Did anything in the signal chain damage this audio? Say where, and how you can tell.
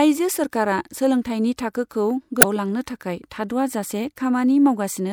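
Yes. At the codec stage, damaged data in the compressed stream produces a brief glitch from 2.39 to 2.45 s, between "सोलोंथाइनि थाखोखौ" and "लांनो थाखाय", as the decoder misreads frames and resyncs.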